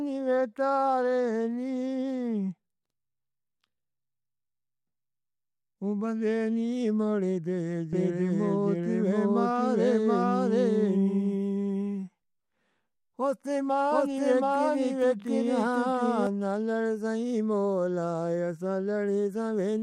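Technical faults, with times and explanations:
7.93 to 16.27 s, doubled audio track: a second full-band copy of the speech trails roughly 0.7 s behind at about equal level, likely from a slower capture path or misaligned edit. Unlike echo, it has no decay or room colour and cuts in and out abruptly.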